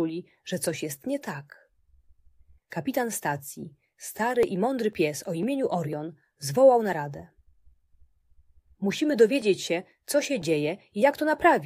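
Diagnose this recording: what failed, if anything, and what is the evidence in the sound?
At the driver or buffer stage, periodic USB or driver dropouts interrupt the stream: something stalls the USB transfer or audio driver at a fixed interval, and each time about a millisecond of samples is skipped rather than padded with silence. From 3.94 s to 11.42 s this produces a train of ticks spaced every 0.50 s, around fifteen in all. Each tick is the waveform jumping across the missing stretch, so the ticks are heard only where the signal is present.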